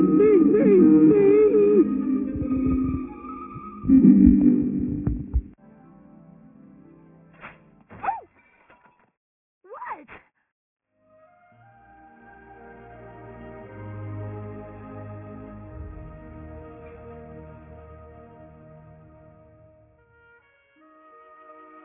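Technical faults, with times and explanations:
Throughout, aliasing: audio reduced to a rate that fits 6 kHz without filtering first, so content above 3 kHz folds back as inharmonic, gritty tones roughly 30 dB down.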